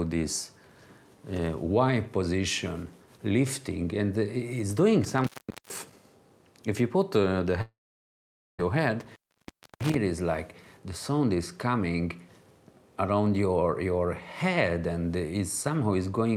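From 5.04 to 5.92 s an intermittent contact, a loose cable or plug briefly opening, breaks the signal for about 430 ms. The sound cuts out with crackle on either side and faint hiss in the gap. At 7.61 s the audio stops, a brief fading remnant gives way to about 0.86 s of silence, and at 8.60 s it resumes with roughly a second of material gone. This is likely a long network dropout. At 9.01 to 9.96 s the contact opens again, for about 650 ms, with the same crackle-edged cut.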